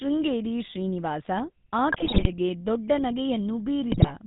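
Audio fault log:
Throughout: GSM full-rate codec. The speech is rebuilt from a vocal-tract filter excited by evenly spaced pulses that carry only a third of the original excitation samples, so the sound takes on a buzzy, gravelly texture. Nothing survives above 4 kHz, which dulls sibilants and removes air. The damage is plainly audible and fits the 13 kbps full-rate coder heard on early mobile calls.
1.92–2.29 s and 3.92–4.11 s: GSM bit errors. In both spans the decoder receives corrupted parameters, which points to roughly a few percent of bits flipped on a weak link. Wrong filter, pitch or gain values bend the spectrum or make the level jump within individual 20 ms frames, so the speech breaks into squawks, pops and gargling. The first burst is longer, spreading over many consecutive frames. The second is briefer, near the end of the clip.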